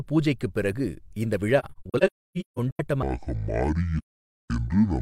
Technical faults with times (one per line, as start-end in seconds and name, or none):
1.59-2.80 AAC frame loss with muting
3.03-5.01 section at the wrong speed
3.97-4.50 AAC frame loss with muting